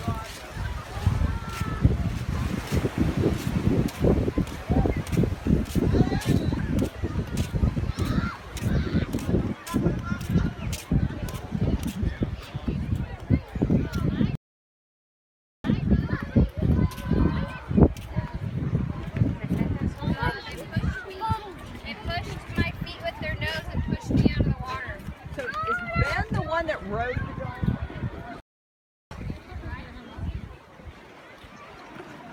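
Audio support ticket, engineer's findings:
Stream reconnect, 14.35 to 15.84 s: 1.29 s dropout, then playback picks up 200 ms earlier, so a short chunk repeats. Likely the server resending a burst after the link dropped; fresh decoder fades in.

Stream reconnect, 28.40 to 29.15 s: 0.71 s silence, resumes roughly half a second later, skipping ahead. Live-stream reconnect, new decoder started mid-stream, first frame fades in.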